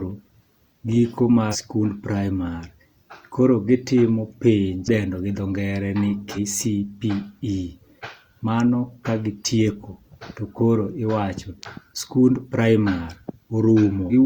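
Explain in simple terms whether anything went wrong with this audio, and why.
Three short glitches break into the speech, caused by damaged data in a compressed stream: at 1.49–1.56 s just before "sikund praimar", at 6.32–6.38 s right after "gi dho ngere ni", and at 14.08–14.13 s. Unlike plain dropouts, these glitches come from a decoder losing its place in corrupted data.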